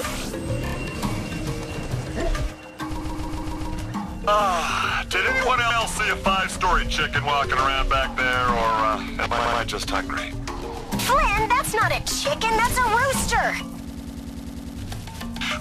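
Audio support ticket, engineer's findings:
Repeated frames: stutter at 0.65–0.74 s, 3.00–3.70 s, 5.70–5.80 s, 9.38–9.59 s and 13.89–14.78 s. Short block replayed back to back: 29 ms ×3 extra, 139 ms ×5, 106 ms ×1, 62 ms ×3, 99 ms ×9. On the waveform, identical segments tile side by side. On the spectrogram, the same pattern is copied. Probable component is the encoder output or transport resending compressed frames. Adds about 2.0 s overall.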